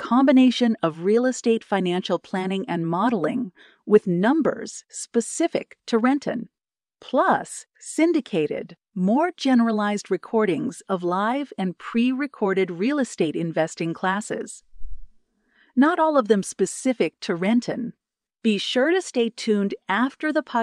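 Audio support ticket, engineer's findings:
Listened through the whole speech recording and nothing turned up worth flagging, so there's no fault to log on this ticket.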